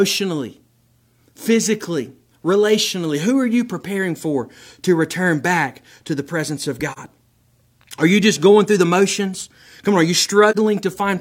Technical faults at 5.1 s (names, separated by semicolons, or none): none